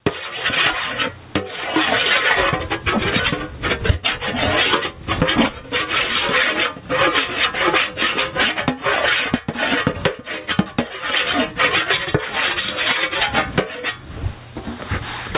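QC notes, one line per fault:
Throughout: gain pumping. The gain swings by around 20 dB, pulling loud and soft parts closer in level and squashing the sound. Likely excessive input gain driving a fast limiter.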